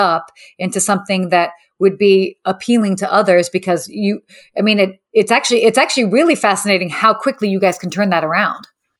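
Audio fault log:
7.30–9.00 s, imaging from linear upsampling: Just after "actually really fascinating how", the sample rate was raised by joining neighbouring samples with straight lines, which fits a 24 kHz stream converted to 44.1 kHz. That interpolation filters poorly, so the highest frequencies are dulled, and mirror copies of the spectrum remain in the band from 12 kHz to 24 kHz at roughly 35 dB below the signal. These copies add a metallic shimmer to sibilants.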